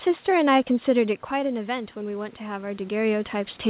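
Speech, band-limited with nothing above 4 kHz as from a G.711 mu-law call path, has an automatic gain rising fault. After the level drops by about 10 dB near 1 s, as the talker moves back, the gain control slowly lifts voice and room noise together by about 5 dB from 0.93 to 3.27 s. On a waveform the envelope swells gradually, and on a spectrogram the background noise floor brightens along with the speech.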